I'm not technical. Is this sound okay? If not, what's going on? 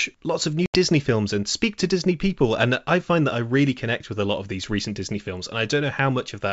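No, not quite. Right near the start, from about 0.66 to 0.76 s, the speech suddenly drops out into a sharp-edged gap of silence. That's packet loss on an ADPCM call. A few small chunks of the call, about 80 ms in total, never arrived, so silence filled the hole. This kind of codec predicts each bit of sound from the last, so after the gap it briefly loses track and the speech comes back slightly distorted before settling.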